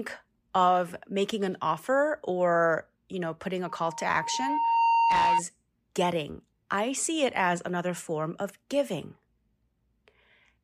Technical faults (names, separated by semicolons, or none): loudspeaker feedback squeal